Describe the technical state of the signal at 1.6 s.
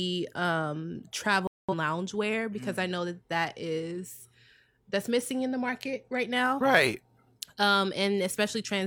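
At 1.6 s you're right in the middle of a digital broadcast dropout running from about 1.47 to 1.73 s. The receiver stopped getting clean frames and muted itself until valid data came back, so the speech just drops to silence and picks up again later in the programme. Around 213 ms of what was sent is gone, which points to a handful of frames, maybe five, failing their checks.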